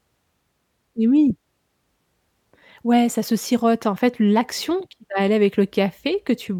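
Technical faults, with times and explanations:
No technical faults can be heard in this speech recording.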